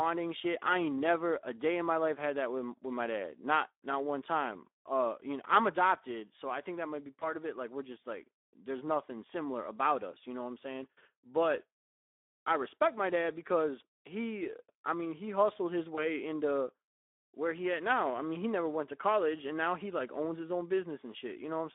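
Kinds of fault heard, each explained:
Speex codec: an old VoIP-style CELP speech codec, with plainly audible coding damage, a low-bitrate sound, and a phone-like band of roughly 250 Hz to 3.6 kHz.
VoIP packet loss concealed by the speech codec: one 20 ms frame dropped at about 7.19 s and again near 15.95 s, each patched over by the decoder extrapolating briefly.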